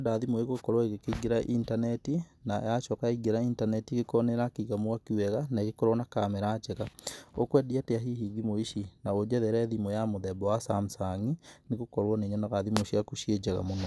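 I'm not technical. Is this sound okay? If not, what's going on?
Yes, no faults heard.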